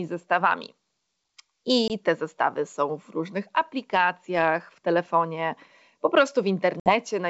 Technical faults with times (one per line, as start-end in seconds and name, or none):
1.88-1.91 packet loss on an ADPCM call
6.80-6.94 packet loss on an ADPCM call